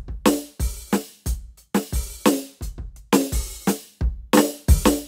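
Music, with a drift correction step from 2.32 s to 3.69 s: playback slows by 5.88% and the pitch drops 105 cents, about a semitone flat, then snaps back. On a spectrogram every harmonic steps down together and jumps back up at 3.69 s. The likely cause is clock-matching software abruptly changing the playback rate to rebalance its buffer.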